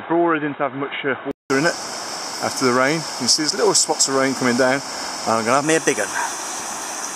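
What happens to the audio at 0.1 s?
The input was likely switched to a poorer device, such as a second microphone or a headset's call profile, for the span from 0.0 to 1.5 s. That narrower path passes a narrower band, so the sound at 0.1 s is dull and boxy, a few decibels quieter, and carries a new noise floor of its own, well below the signal. A silence of about 0.19 s marks the switch back.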